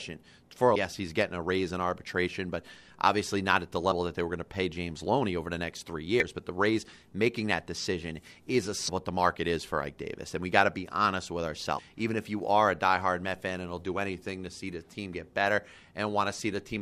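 Damaged data in a compressed stream breaks into the speech five times: at 0.75 s, then 3.90–3.92 s, 6.20–6.23 s, 8.87–8.89 s and 11.77–11.79 s. Each lasts only about 15 to 25 ms. At these points the compressed bytes were corrupted, so the decoder misread or discarded the affected frames, lost sync, and hunted for the next valid frame header. Each one is heard as a brief chirp or blip cutting through the speech.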